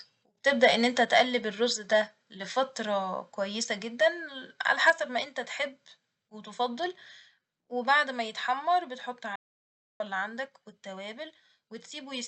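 Speech recorded through a call path, with three kinds of fault. Microphone overload distorts the loudest peaks at 0.63–0.67 s, just before "ان انت", then at 1.14–1.21 s and 4.7–4.9 s. The input runs about 2 to 3 dB past full scale, with a fair share of samples flattened in the first burst. The likely cause is microphone input volume set too high. The waveform shows squared-off tops, and the spectrogram shows harsh broadband smearing above the voice harmonics. Three microphone volume step-downs follow at 1.05 s (right after "ان انت"), 4.9 s and 8.04 s. In each, voice and background drop abruptly by about 3 to 4 dB. This is likely the call software's automatic gain control reacting to the clipping, which fits the first two drops coming just after distorted peaks. On the waveform the envelope shrinks in a single clean step, and the spectrogram dims uniformly across all frequencies at once. 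An audio dropout to silence runs from 9.36 to 10.0 s, about 0.64 s, between "ما يتحمر بتحط" and "اللي عندك", likely from the input stream being lost while silence was written. The waveform is a near-flat line and the spectrogram a dark band, with no room tone left in it. The speech there is gone. Through the Opus call path at about 64 kbps, content stops at an 8 kHz cut-off.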